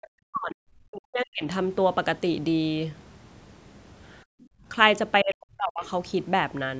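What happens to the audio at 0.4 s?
At 0.4 s you're inside a stretch of speech suppressed in double talk, running from about 0.29 to 1.45 s. The speech dips hard, sinking by something like 40 dB at its deepest, with roughly a second affected in total. The likely cause is the far end talking at the same moment: the echo canceller couldn't tell this talker from its own loudspeaker echo, so it clamped down on both.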